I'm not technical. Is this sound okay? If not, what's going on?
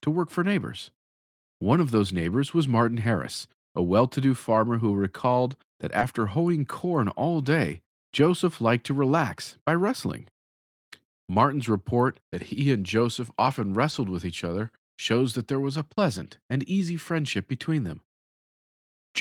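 No. Two brief glitches of short concealed packet loss, at 5.99–6.03 s after "farmer who recalled that" and at 13.91–13.95 s before "with each other shows". A sliver of the speech arrived too late, and the receiver briefly extended the preceding sound to cover the gap, leaving a quick smear.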